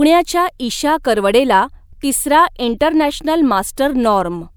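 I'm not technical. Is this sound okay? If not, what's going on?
Yes, no faults detected in this recording.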